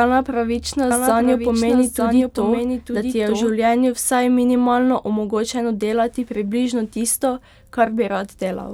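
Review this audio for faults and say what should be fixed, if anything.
From 0.91 to 3.51 s, before "vsaj minimalno omogočeno delati", a dry, slightly quieter copy lags about a second behind: a doubled audio track, likely from a duplicate capture path. Route each source through only one input so that no second copy reaches the mix.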